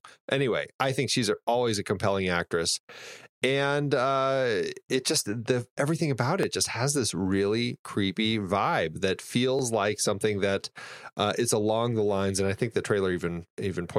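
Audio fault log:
0.12–12.75 s, clock drift buffer slips: a regular click every 3.15 s, about five in all, across the speech. This is likely two devices' clocks disagreeing by around 500 ppm, so a buffer periodically drops or repeats a small block of roughly 70 samples.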